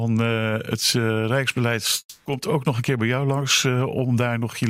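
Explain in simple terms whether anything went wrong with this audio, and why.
Something did go wrong. From 1.99 to 2.27 s the sound turns into a fading buzz, then brief silence, before resuming with about a quarter second missing. This is likely a long network dropout: the audio stopped arriving and the player filled the gap.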